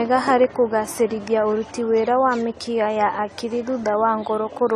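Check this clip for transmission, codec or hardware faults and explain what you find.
One codec fault is present across the whole clip.

AAC compression, throughout: the speech has nothing above 14 kHz, and the damage is plainly audible, most likely from AAC-LC coding at a low bitrate, which fits roughly 32 kbps. Short of bits, the encoder drops the top band entirely and coarsely quantises or noise-fills what remains, so the speech sounds dull and smeared, with a fizzy, warbling edge on sibilants and held sounds.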